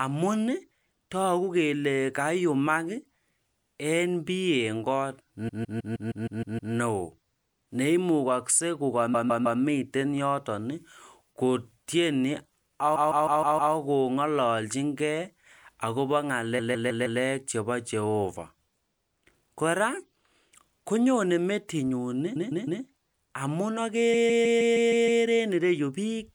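Repeated frames stutter the speech at 5.48 to 6.73 s, 9.13 to 9.60 s, 12.95 to 13.73 s, 16.58 to 17.20 s, 22.35 to 22.82 s and 24.13 to 25.22 s. Each time the same 157 ms block plays again between three and eight extra times, which fits a run of six compressed frames being duplicated. Unlike a dropout, nothing is lost. Each repeat adds time, up to about 1.25 s at 5.48 s.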